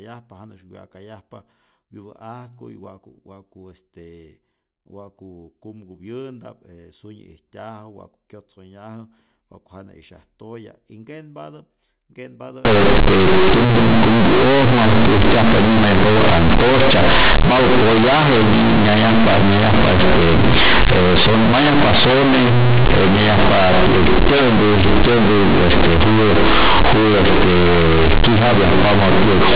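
From 12.65 s to the end, the speech suffers from companded audio read as linear: mu-law bytes are being played straight out as 8-bit linear samples, with no expansion step. Because mu-law packs sign and level into a logarithmic code, every sign change now throws the output across roughly half its range, and soft passages come out as loud as strong ones. The result is harsh, buzzy, very loud distortion, with heavy noise filling the pauses. Before 12.65 s, the audio has the narrow telephone band expected of mu-law G.711 telephone coding.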